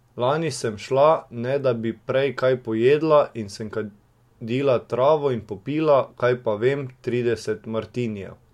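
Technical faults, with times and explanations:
No technical faults detected.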